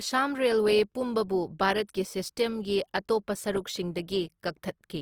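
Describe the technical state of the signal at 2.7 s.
At 2.7 s the speech carries plainly audible Opus compression damage, present across the whole clip rather than at that moment alone. In its CELT music mode the encoder holds each band's energy but fills starved bands with folded or noise content, so the speech sounds rough and grainy, likely from a low bitrate near 24 kbps. A spectrogram shows full bandwidth reaching about 20.2 kHz, with smeared, noise-like texture replacing clean harmonic detail.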